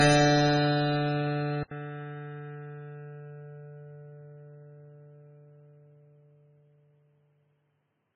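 From the start, the music sounds watery and swirly, with smeared attacks and nothing above 9.8 kHz. This is heavy MP3 compression, likely at a very low bitrate around 16 kbps, where the encoder drops the treble and lets weak frequency lines flicker between frames.

At 1.63 s the sound cuts out for 80 ms, then returns duller and boxier, with nothing above 3.8 kHz, about 5 dB quieter, and a faint new background noise well below the music. The input likely switched to a poorer device, whose narrower band and own noise persist to the end.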